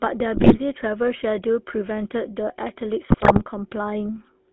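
GSM full-rate codec coding runs through the whole speech clip. The coder models the vocal tract and excites it with a sparse regular pulse train, which fits 13 kbps full rate. The line passes only about 250 Hz to 3.5 kHz, and the result is a plainly audible buzzy, gravelly roughness.

GSM bit errors break in from 0.34 to 0.58 s and again from 3.10 to 3.45 s. Corrupted filter, pitch and gain values reach the decoder, bending the spectrum and jolting the level frame by frame, so the speech collapses into squawks, pops and gargling across both stretches.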